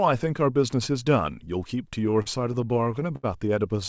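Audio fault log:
1.92–3.25 s: repeated stalls (stutter). Thirteen brief hitches, the longest 74 ms and about 0.2 s in total, as the jitter buffer ran dry and the last sound was held. Unlike dropouts, nothing is cut out; the audio drags, then resumes intact.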